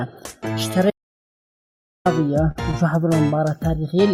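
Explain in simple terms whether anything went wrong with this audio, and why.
Two things went wrong here.

At 0.90 seconds the sound cuts off and does not return until 2.06 seconds. This is an audio dropout to silence. For about 1.15 seconds there is dead quiet, not even the faint background hum a room normally has. The input was likely lost for that stretch, perhaps through a loose connection or a brief mute, while the recording kept going and wrote silence. Whatever happened in that gap is gone for good.

Shortly after, from 2.51 to 2.58 seconds, there is a short stall from a late packet. A small chunk of audio arrived late. The player had nothing new to play, so it held the last bit of sound for about 39 milliseconds until the chunk showed up. Nothing is lost. You may hear a tiny stretch or faint buzz, and everything after it plays 39 milliseconds later than planned.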